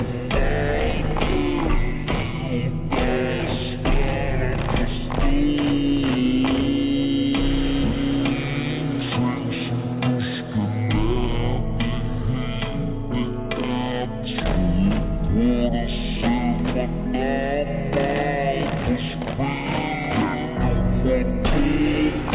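From start to finish the sound runs at half speed and a full octave low, 12 semitones down, dragged and murky. This is a wrong sample rate fault: playback at half the recording rate with no conversion, which fits 16 kHz audio being played out at 8 kHz.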